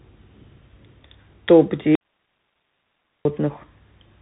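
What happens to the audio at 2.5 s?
At 2.5 s the sound is inside an audio dropout to a faint residue, running from 1.95 s to 3.25 s, about 1.3 s in all. The speech cuts off abruptly and returns just as sharply, leaving only a faint hiss roughly 55 dB below the speech level. The likely cause is that the wanted signal was lost while the path after the break stayed live and passed its own noise floor. On a waveform this shows as a flat, near-silent band with hard edges on both sides; on a spectrogram the speech harmonics vanish, leaving only a weak, diffuse wash of noise.

The whole clip, including both edges of that gap, also carries the Bluetooth CVSD headset codec at 64 kbps. Its one-bit up-or-down coding with an adapting step leaves nothing above 3.8 kHz, puts a granular hiss under the speech and roughens sibilants. A spectrogram shows a hard ceiling at 3.8 kHz.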